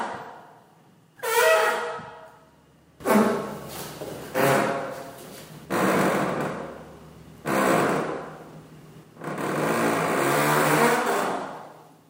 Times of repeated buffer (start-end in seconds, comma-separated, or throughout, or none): 8.50